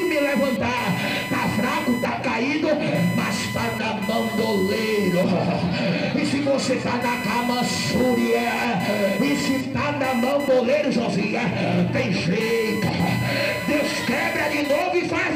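From start to finish, computer activity noise sits under the sound: a buzzing, chirping layer that rises and falls with the machine's workload rather than with the programme. Shifting current draw from the processor, graphics card or mouse disturbs the ground the audio circuit shares, pulsing at roughly 1 kHz and only about 15 dB below the signal. A spectrogram shows a bright line near 1 kHz with harmonics, switching on and off in blocks, while the waveform carries a fine, fluctuating fuzz between louder passages.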